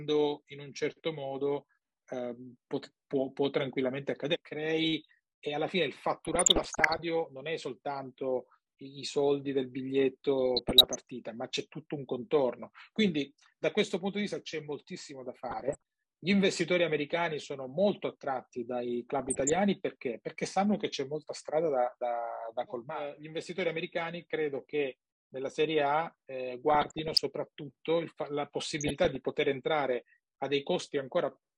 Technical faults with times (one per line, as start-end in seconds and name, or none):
0.00-31.57 MP2 compression
6.25-7.02 DAB burbling
10.46-11.01 DAB burbling
15.49-15.82 DAB burbling
19.19-19.56 DAB burbling
26.70-27.20 DAB burbling
28.79-29.16 DAB burbling